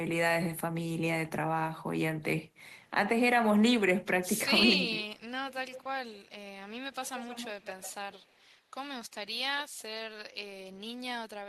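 From 4.65 to 5.08 s the speech dips. Over roughly 300 ms it is pulled down by about 15 dB at its deepest. This sounds like speech suppressed in double talk. Both sides were likely talking at once. The echo canceller could not tell the near talker from the loudspeaker echo, so it turned everything down.

Echo leak follows in five bursts: 5.16 to 5.22 s, 5.48 to 5.86 s, 6.10 to 6.32 s, 6.92 to 7.94 s and 8.12 to 8.40 s. A delayed copy of the speech trails it. The first three lag by 110 ms and the last two by 150 ms. The level swings from about 40 dB below the speech to about 15 dB below. The longest burst, near 7 s, is the loudest. The far end was likely on a loudspeaker, and its canceller passed part of the pickup back.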